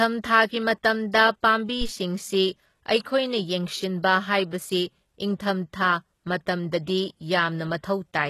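Throughout the speech, the treble has a gritty, metallic quality, most noticeable on s sounds, and nothing reaches above about 12.3 kHz. The damage is heavy. This likely comes from HE-AAC compression: only the lower spectrum is truly coded, and the upper bands are rebuilt by copying lower content upward under a coarse envelope, so the harmonics above the crossover no longer line up. The sound fits HE-AAC v2 at about 16 kbps.

From 1.81 to 1.89 s a deep, low thump cuts in and dies away quickly, with a decay of about 17 ms. This is a phantom power thump: a supply was switched on or off while the input was live, and the sudden voltage step passed through the coupling capacitors and reached the recording as a single low-frequency pulse.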